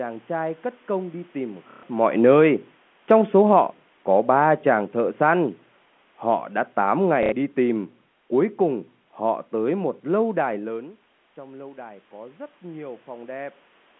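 From 1.71 to 1.83 s, packet loss with last packet repeated fills a 120 ms gap. The receiver replays the last packet, so the sound stutters robotically, which fits 30 ms packets. The same happens from 7.23 to 7.32 s, over 90 ms.

Automatic gain falling runs from 3.02 to 5.6 s, cutting about 4 dB, and from 6.24 to 10.54 s, cutting about 5 dB. The control judged the input too loud or its background too strong, so sound and background sink together.

Automatic gain rising follows from 10.75 to 13.51 s. The talker moved away around 10.5 s and the input dropped about 16 dB. The control lifts gain about 4 dB, and sound and background swell together.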